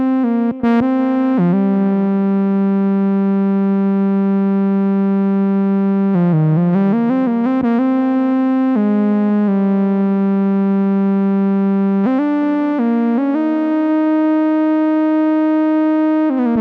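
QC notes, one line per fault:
Nothing to flag here; I listened all the way and didn't hear anything that needs a note.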